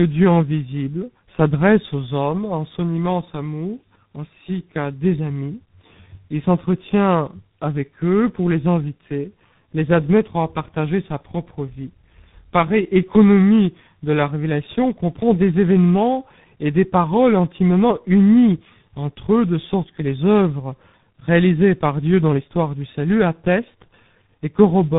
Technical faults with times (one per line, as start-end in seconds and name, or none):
0.00-24.98 tandem speech coding